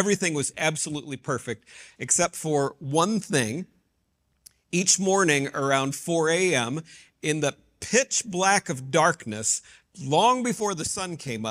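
At 1.00 s the sound abruptly drops by about 6 dB and stays there until 1.26 s, then snaps back. The same sudden step down returns at 10.60 s and holds to the end of the clip. The likely cause is one channel dropping out: with one side of the stereo pair lost, material shared by both sides falls by half in the mono sum, and anything carried only by that channel vanishes.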